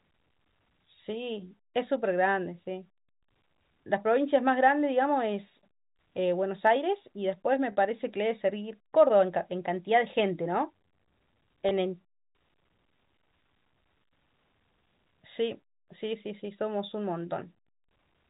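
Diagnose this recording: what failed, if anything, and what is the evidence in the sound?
Dropped samples at 6.67 s and 9.78 s: two sharp single clicks where the waveform skips ahead by a couple of samples, likely a driver or buffer handoff losing data.

Packet loss with pitch repetition at 7.72–7.77 s (50 ms) and 11.69–11.71 s (20 ms): network losses concealed by repeating the last pitch period, heard as a briefly held, buzzy sound.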